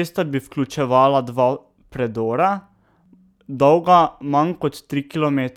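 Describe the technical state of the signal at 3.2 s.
The signal at 3.2 s is intact, with no audible fault at that point.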